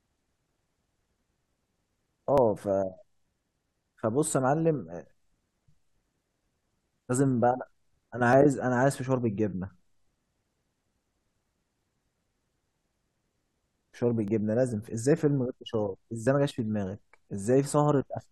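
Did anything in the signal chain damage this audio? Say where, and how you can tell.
Yes: overlap between stream segments at the network stage, with tiny skips at 2.38, 4.37, 6.34, 8.33, 14.28 and 16.27 s. Their 2-second spacing, unlike random dropouts, shows overlapping segments being trimmed.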